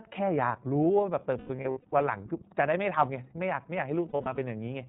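The whole clip is speech squeezed through the iLBC codec. It's narrowband, so everything above 4 kHz is gone, and the voice has that slightly rough, synthetic edge you get from its independently coded frames. The sound fits the 30 ms, 13.33 kbps mode.

From 1.38 to 1.93 s there are lost iLBC frames. About 330 ms of audio dropped out in bursts spread over 540 ms, the longest around a tenth of a second. The decoder covers each hole by repeating the last pitch cycle mixed with noise, so you hear a held, buzzy vowel that recovers almost immediately.

The same thing happens again from 4.08 to 4.38 s. About 150 ms is lost across 300 ms, with the longest run around 70 ms, giving shorter smeared, breathy stretches.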